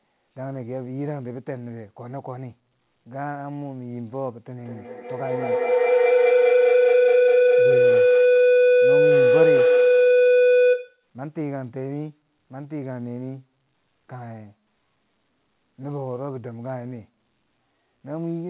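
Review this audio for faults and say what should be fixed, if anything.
Feedback howl runs from 4.61 to 11.07 s: two devices share the call, so each microphone-to-loudspeaker loop returns louder, about every 200 ms, narrowing to a tone near 500 Hz that peaks about 13 dB above the speech. To prevent it, join from one device only, or mute the second device's microphone and speaker.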